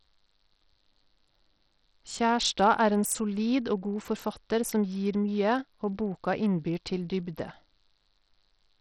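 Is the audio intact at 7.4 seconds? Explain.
No. At 7.4 seconds the speech carries damage that runs through the whole clip, not just that moment. It sounds like Bluetooth SBC compression, likely at a low setting around 64 kbps. This codec splits the sound into a few wide bands and shares out too few bits. The weak upper bands get little or nothing, so the treble thins and flickers. Nothing reaches above 17.4 kHz. Coarse quantisation adds a gritty, rough noise over the speech.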